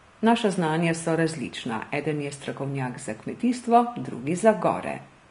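Throughout the speech, the treble sounds hissy and grainy, with roughened tones and smeared consonant attacks, likely from Vorbis compression at a low setting consistent with about 34 kbps. A spectrogram shows nothing above a lowered cut-off and a noisy, speckled upper band below that edge.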